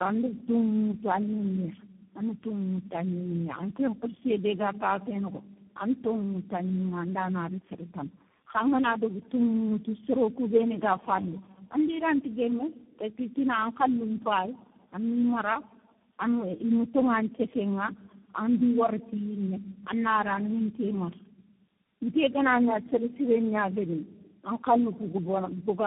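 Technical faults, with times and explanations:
Throughout, tandem speech coding: what sounds like four speech coders in a row each re-code the last one's damage, leaving rough, warbly, muffled speech with nothing above 3.8 kHz.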